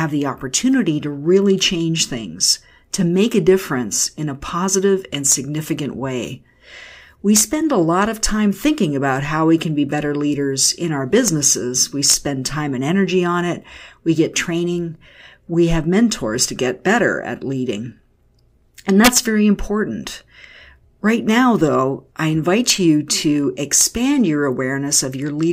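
Speech with integer overflow: loud peaks wrap to the opposite sign instead of being limited, giving violent cracks at 5.32, 7.36–7.41, 11.28, 12.10–12.14, 19.05–19.18, 22.70 and 23.81 s. Even with only about 1 to 2 dB of overdrive, each crack is far harsher than clipping's flattened buzz.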